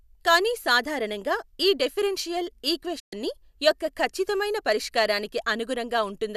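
A digital broadcast dropout hits the speech at 2.99 to 3.13 s: lost or corrupted frames made the receiver mute, fading out over 8 ms and losing about 120 ms of sound.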